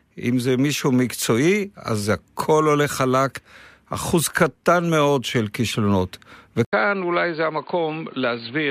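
At 6.65 s the speech goes silent for 80 ms, then returns duller and boxier, with nothing above 4.7 kHz, a level drop of around 5 dB and a new background noise roughly 30 dB down. This is likely an input switched to a poorer device. The gap and the fresh background noise set it apart from a simple low-pass filter.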